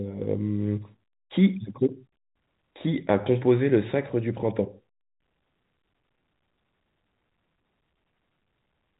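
Nothing stood out on listening to this speech, which comes through the narrow band of G.711 telephone coding with nothing above about 3.8 kHz.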